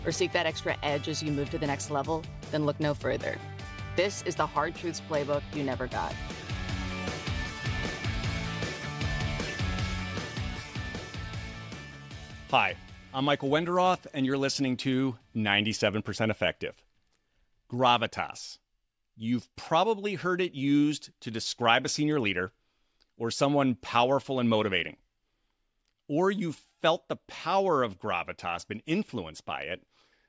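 No technical faults can be heard anywhere in it.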